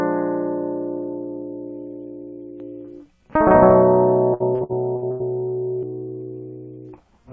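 From 2.6 to 5.83 s the music has a flat, slapback echo at about full level, roughly 150 ms behind: a doubled audio track, likely a second, slower capture path. From 4.34 to 5.23 s it turns choppy and robotic, with several holes up to 86 ms patched by stretching earlier sound: repeated packet loss, over a call path with nothing above 8 kHz.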